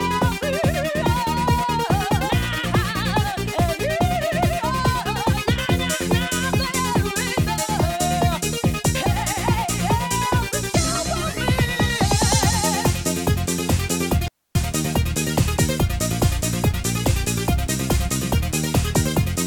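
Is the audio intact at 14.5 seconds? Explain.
No. At 14.5 seconds the audio falls inside an intermittent contact fault spanning 14.22 to 14.55 s. A loose cable or plug briefly loses its connection, so the signal path stays open for about 0.27 s before contact is restored. The sound drops out almost completely for that stretch, with a crackle where the connection breaks and again where it remakes, and a faint hiss remains while the line is open.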